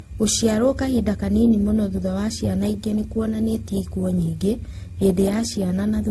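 Throughout the speech, the audio was likely passed through several lossy codecs in turn, a case of transcoding between lossy codecs. The stacked artefacts point to a low-rate first stage followed by AAC-type and WMA-type encoding. Each stage's artefacts sit together, and nothing remains above 12.2 kHz.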